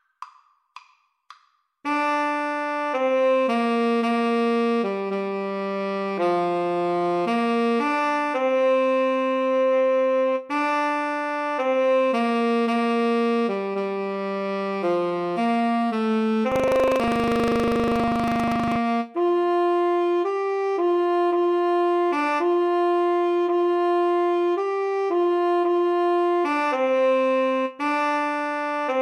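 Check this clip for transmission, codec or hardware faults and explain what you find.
One fault: buffer tearing, from 16.48 to 18.80 s. The sound turns into a robotic rattle buzzing at 25 Hz. The ring buffer's writer and reader have slipped, so each 40 ms period carries a small slice of audio from roughly 150 ms earlier, hard-joined on both sides.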